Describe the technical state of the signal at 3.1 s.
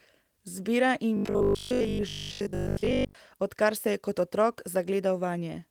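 At 3.1 s the speech is near the end of a robotic sound from repeated short buffers, running from 1.17 to 3.15 s, just before "odkar se je". It has a rigid 50 Hz metallic buzz, likely from replaying 20 ms chunks over most of the stretch. Unlike the light Opus coding, this buzz holds a fixed pitch.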